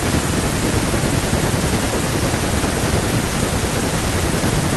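A short speech recording, with no technical faults to be heard anywhere in it. There is nothing to place at a time or trace to a cause.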